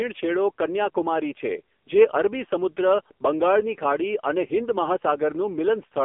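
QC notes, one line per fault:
Throughout: AMR narrowband mobile codec, heavily coded at 6.7 kbps, so the voice turns buzzy and synthetic from too few excitation pulses per frame. The spectrogram shows an empty band above 3.5 kHz and little below about 250 Hz, the shape of a telephone line.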